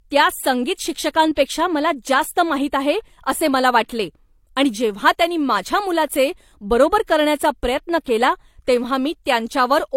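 Throughout the speech, nothing sounds above 16.2 kHz. Two layers of coding artefacts are heard together. This is transcoding between lossy codecs, likely an MP3 around 96 kbit/s re-encoded as HE-AAC near 32 kbit/s, each stage adding its own artefacts.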